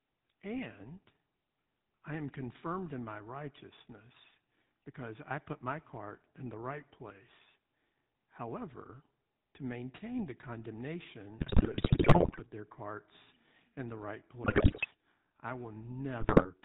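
The whole recording carries the GSM full-rate codec. Its regular-pulse excitation keeps only a sparse, decimated pulse train to drive the vocal-tract model, and the bandwidth stops at 4 kHz, so the speech sounds buzzy and gravelly, with the damage plainly audible throughout. The overall character fits the 13 kbps full-rate coder.

GSM bit errors break into the decoding three times. From 11.38 to 12.40 s, ending just before "their carts in the", corrupted filter, pitch and gain parameters turn the speech into squawks, pops and gargling. A shorter burst runs from 14.44 to 14.86 s, right after "carts in the right". A third, from 16.20 to 16.49 s, has a lower error rate, with fewer flipped bits reaching the decoder there.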